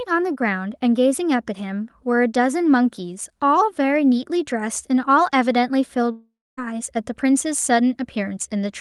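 From 6.11 to 6.59 s the speech drops out for about half a second, likely a long network dropout. The last sound is stretched into a fading buzz, then about 0.25 s of near-silence, and the speech resumes with that stretch simply gone.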